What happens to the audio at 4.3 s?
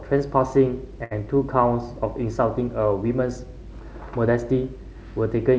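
Nothing goes wrong at 4.3 s: the speech carries on intact through the call path, with only its steady band limit at about 8 kHz from the G.722 wideband coding.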